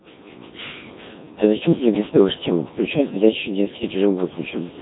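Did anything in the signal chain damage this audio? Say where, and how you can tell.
Yes, at the codec stage, the whole way through: this speech has the robotic, buzzy Codec 2 vocoder sound, heavily damaged and with nothing above 3.8 kHz. Only pitch, voicing and envelope survive, so the voice is rebuilt from sine waves, which fits roughly 1.3 kbit/s.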